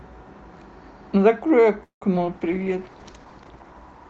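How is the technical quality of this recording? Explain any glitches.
The technical quality is impaired by three call-transmission faults in quick succession: a stall, a brief loss, then a sustained drop in coding quality. They are all typical of the Opus call path, whose band limit near 8 kHz applies throughout.

From 1.83 to 2.03 s there is a call audio freeze. The speech stops and the last sound is stretched into a fading buzz or hiss, then about 120 ms of silence, before resuming where it left off. Nothing is lost, but roughly 180 ms of delay is inserted. Held-up packets that emptied the jitter buffer are the likely cause.

At 2.15 to 2.18 s comes a short concealed packet loss. About 20 ms of audio never reached the decoder, so the receiver extrapolated from the preceding sound and crossfaded back. It is heard as a quick smear or wobble in the speech.

From 2.33 s to the end there is a call bitrate drop. 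A falling bandwidth estimate pushed the Opus encoder from 32 to 10 kbps, and it stayed at the lowest rate for about 1.2 s. Coarser coding makes the speech rough and watery, with duller highs.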